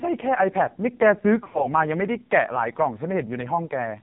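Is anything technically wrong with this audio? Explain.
Yes. Throughout, the speech is buzzy, synthetic and dull, with nothing above 4 kHz. This is the AMR narrowband mobile codec under heavy damage: the voice is rebuilt from a simple vocal-tract model and a few pulses per subframe, and the coarseness fits a low rate of around 5.9 kbps.

From 1.44 to 1.68 s, the speech briefly dips, warbles and smears, then returns rough. These are lost AMR speech frames, about 100 ms missing across 160 ms, with the longest gap around 60 ms. The decoder filled each gap by repeating its last pitch and vocal-tract settings at falling gain.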